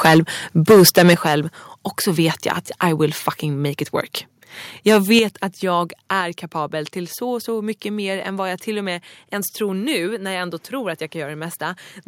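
From 0.04 to 0.19 s the speech breaks up into a harsh, crackling edge, likely microphone overload: input gain set so high that peaks drive about 13 dB past the converter's ceiling, with roughly a tenth of samples flattened. On a waveform the tops sit as flat plateaus, and a spectrogram shows broadband splatter smeared up into the high kHz range above the speech harmonics. At 0.15 s, inside that burst, level drops abruptly by about 2 dB, likely a microphone volume step-down as the call software reacts to the clipping. The waveform envelope shows a sudden step, and the background noise floor on the spectrogram darkens at the same instant.

The same pattern repeats from 0.69 to 1.34 s, likely overload again, about 11 dB over, with around 15% of samples squared off into flat-topped runs and dense distortion across the spectrum. At 1.14 s the microphone volume likely steps down by about 7 dB, a clear drop in both the waveform envelope and the background level.

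From 4.87 to 5.19 s a milder crackle appears, likely overload at about 5 dB over with only a few percent of samples clipped, so the flat tops are brief and sparse. At 5.19 s, just before "att jag", the microphone volume likely steps down by about 6 dB, and the envelope and background fall together in a single visible step.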